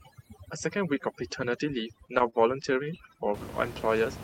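From the start until about 3.34 s the background is pulled down and breaks up into twinkling specks. That is overdone noise removal: the suppressor, set far too hard, shuts off individual frequency bands whenever they sit close to its noise estimate, taking the softer parts of the speech along with the room noise, which lies about 12 dB below the speech.

Between 2.07 s and 3.20 s the audio also drags and stutters in nine brief hitches, the longest only 26 ms, stretching that stretch by about 110 ms in total while nothing is actually lost. These repeated stalls (stutter) come from packets arriving late, so the jitter buffer kept running dry and the receiver extended the last sound each time until data caught up.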